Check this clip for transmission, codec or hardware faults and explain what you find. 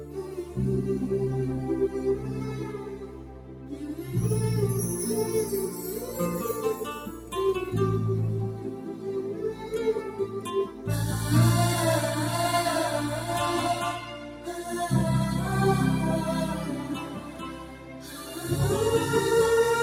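A speech-oriented noise suppressor left active on non-speech material is the fault here. It treats steady parts of the audio as noise and pulls them down, so the level swings by around 10 dB throughout: onsets survive while sustained sound and decays sink, giving a pumping, thinned character.

Sound cut by the noise suppressor occurs at 0.0–0.57 s, 2.6–4.05 s, 7.06–7.32 s, 8.49–9.73 s, 10.01–10.42 s, 10.66–10.87 s, 14.17–14.64 s and 17.02–18.15 s. In each span the suppressor misjudged held or fading sound as noise and attenuated it by up to about 6 dB, so those stretches dip and tails are clipped short.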